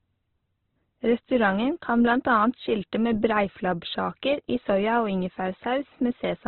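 Throughout the speech, nothing sounds above 4.1 kHz, and tones turn rough, grainy and noisy. That points to heavy Opus compression, likely in its music mode at a very low rate, near 12 kbps. Starved bands get filled with noise or folded copies.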